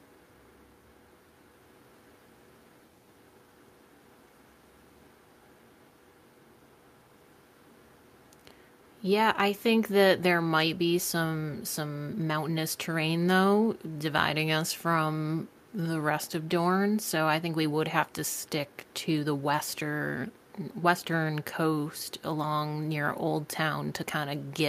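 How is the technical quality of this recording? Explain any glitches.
No glitches or faults heard.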